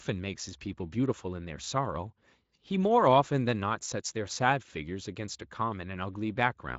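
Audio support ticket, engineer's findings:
No faults found in this speech recording.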